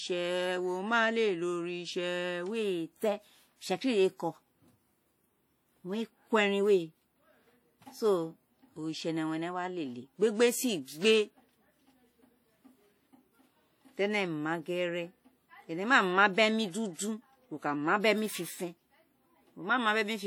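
Across the whole speech clip a ringing, washy smear hangs around each sound, with a hiss that swells and fades along with the signal. This is likely WMA compression: long transform blocks spread quantisation noise over tens of milliseconds, and the plainly audible damage fits a bitrate near 48 kbps, though content still reaches about 20.1 kHz.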